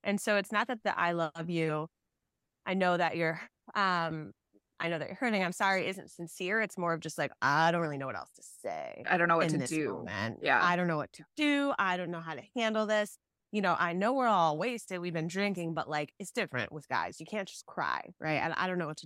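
No faults detected anywhere in the speech recording.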